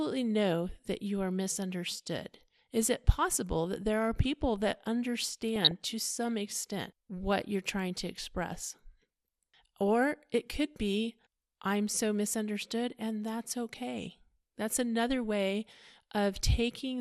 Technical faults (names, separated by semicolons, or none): MP2 compression; DAB burbling